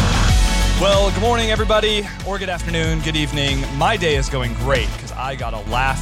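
At 2.00 s the level drops abruptly by about 6 dB and stays down until 2.60 s. The same dip returns from 4.97 to 5.67 s. The likely cause is one channel dropping out, halving what both channels shared in the mono sum.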